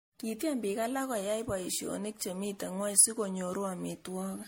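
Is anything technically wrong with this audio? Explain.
Yes. Throughout the speech there is generation loss: a swirly, hollow, smeared quality, with consonant attacks blurred, beyond what one encode at this level would cause. The likely cause is repeated MP3 re-encoding, around seven passes at a rate that points to 64 kbit/s, each quantising on a shifted frame grid so the errors pile up. A spectrogram shows nothing above 16.5 kHz and blotchy, flickering holes between harmonics. On the waveform, transients look softened and smeared.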